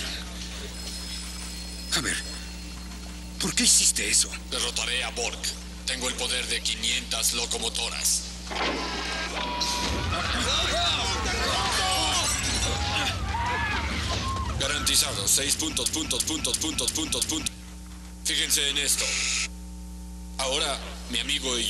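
A ground loop or a nearby transformer is feeding the power line into the signal for the whole clip, producing mains hum: a steady 60 Hz tone with low harmonics, strong enough to sit only around ten decibels below the sound itself.

From 15.86 to 17.47 s, the playback chain likely stalled and kept resending its last buffered fragment, causing a broken-record loop. A 0.34 s piece repeats five times back to back, and the audio that belonged in that stretch is missing.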